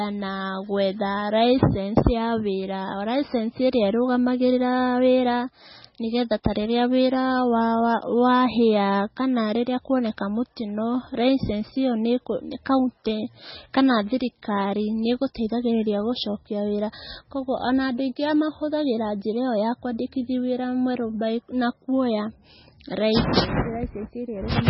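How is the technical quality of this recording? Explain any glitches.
Poor: the whole speech recording carries heavy damage most likely from MP3 compression at a very low bitrate, consistent with roughly 16 kbps. With bits that scarce, the encoder discards everything above 5.6 kHz and drops weaker spectral detail frame by frame. Speech sounds dull, watery and swirly, with chirpy, smeared s sounds. On a spectrogram there is a hard ceiling at 5.6 kHz and patchy, flickering holes below it.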